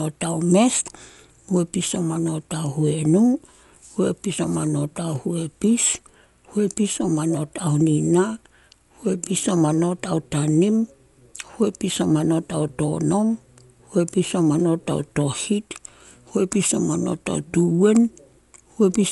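Throughout the speech, the sound is dull. Nothing is heard above 11.5 kHz. Tones carry rough, fluttering noise. This is likely Dolby Digital compression. The encoder narrowed the band and gave many frequency lines no mantissa bits, which the decoder filled with dither noise, which fits a bitrate near 64 kbps.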